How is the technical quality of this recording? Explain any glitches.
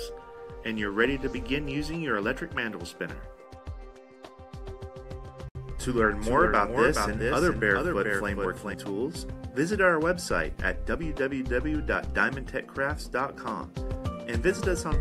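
The recording has two clear faults, overlapping around 5 s.

From 4.66 to 8.74 s there is a doubled audio track: a second full-band copy of the sound runs roughly 0.4 s behind, about 5 dB quieter. It is likely a second capture path or misaligned edit layering two copies. The echo is dry, with no decay, and starts and stops abruptly.

At 5.49 to 5.56 s there is a digital broadcast dropout. The receiver muted after losing or rejecting incoming data, leaving a 64 ms hole of silence, which fits two lost frames. Whatever was transmitted in that gap is simply missing when the sound resumes.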